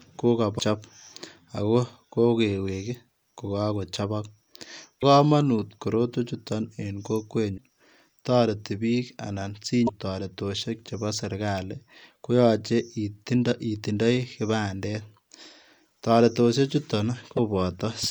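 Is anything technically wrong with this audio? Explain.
Yes. Damaged data in the compressed stream causes brief glitches at 0.56–0.62, 4.98–5.03, 7.54–7.59, 9.84–9.89 and 17.33–17.39 s. Corrupted frames lose decoder sync. Each shows as an abrupt break on a spectrogram and a jagged waveform discontinuity.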